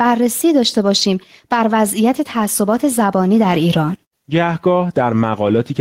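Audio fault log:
Throughout, gain pumping: the gain swings by around 5 dB. That's likely a fast limiter or compressor clamping down on gain set far too hot, so everything sounds squashed.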